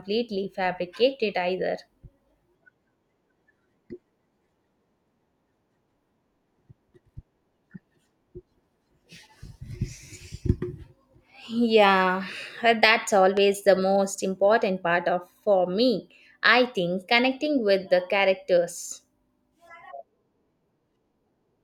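At 13.37 to 13.39 s a single loud pop cuts through the speech, a sharp, hard click that jumps well above the level of the talking, by roughly 10 dB, while the speech carries on underneath without a break. It is over in about 20 ms. The likely cause is a sudden voltage step or pulse entering the signal path, such as a plug being disturbed, a switch, static discharge or a driver glitch, which the following circuitry shapes into a brief spike.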